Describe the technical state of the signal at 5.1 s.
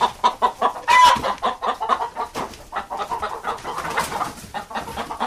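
At 5.1 s the signal is intact, with no technical fault audible at that moment.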